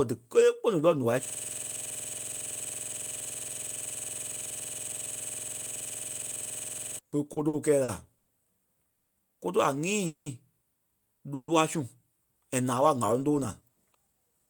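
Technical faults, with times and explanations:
1.25–6.99 s, system hang loop: a machine-gun stutter as one 46.44 ms fragment repeats exactly, about 123 times at 21.5 Hz. The computer or driver froze while the sound hardware kept replaying its ring buffer, which fits a 2048-sample buffer.
7.33–8.30 s, repeated stalls (stutter): the speech drags and catches four times, with about 220 ms of stretched-out sound filling the gaps, the longest 90 ms. Late packets kept emptying the jitter buffer, so the receiver extended the last sound each time; nothing is lost.
8.93–9.12 s, 10.06–10.29 s, 11.34–11.51 s, call audio freeze: the sound hangs as a fading buzz for 160, 200 and 140 ms, briefly dropping to silence in the first and last, then resumes where it stopped. Likely packets delayed in transit ran the jitter buffer dry, inserting a gap without losing speech.
13.41–14.48 s, jitter buffer speed-up: right after "ŋ̀áloŋ tóo" the speech hurries, running at about 113% speed with unchanged pitch. 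With excess audio buffered, the receiver trimmed short pitch-period slices repeatedly, roughly 150 ms in total, to cut the delay.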